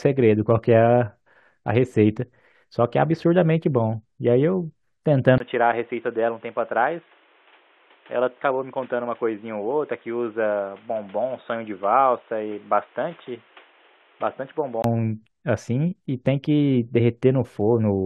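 At 5.38 s the speech drops out for about 20 ms, then returns dull, boxy and a little quieter, with nothing above 3.8 kHz and faint new background noise; it clears at 14.84 s. This is likely an input switched to a poorer device mid-recording.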